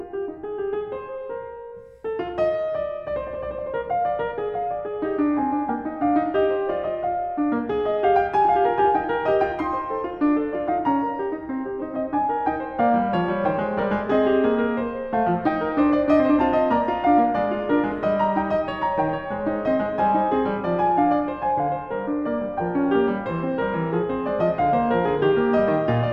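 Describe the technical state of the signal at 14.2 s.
At 14.2 s the music plays through intact, with no audible fault in the signal at that point.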